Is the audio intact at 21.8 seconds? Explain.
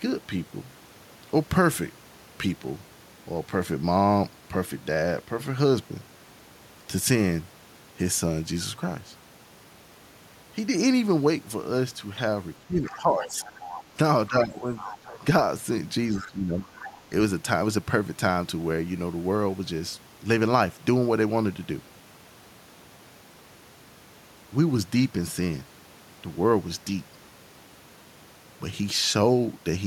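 Yes, at 21.8 seconds the speech plays through intact, with no dropout, click, distortion or other fault audible at that moment.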